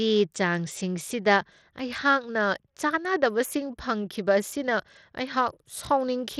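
From start to end, the speech's treble flickers and drops out under gritty noise. The likely cause is Bluetooth SBC compression, fitting about 80 kbps.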